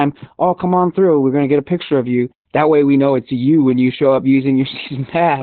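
From start to end, heavy Opus voice compression, fitting about 8 kbps, muffles and roughens the speech. A spectrogram shows nothing above 4.2 kHz.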